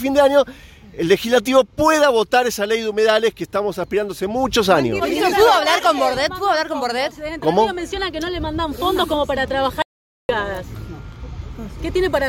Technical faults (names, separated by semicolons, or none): audio dropout to silence